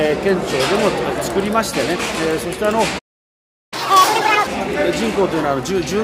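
At 2.98 s the sound stops dead and stays silent until 3.74 s, about three quarters of a second. This is a playback stall, most likely the player running out of buffered data or its output thread being blocked. Unlike a dropout, where a brief piece of audio simply goes missing, the silence is long and clean, and when sound returns it carries on from where it stopped rather than jumping ahead.

From 3.74 s to 4.47 s the audio rushes at twice normal speed, its pitch raised by roughly ten semitones, before settling back. This is catch-up at higher speed: the player resamples its backlog to recover the time lost in the stall. Speed and pitch rise together, which separates it from a pitch-shift fault that leaves tempo alone. It also follows directly on the silence and lasts only briefly.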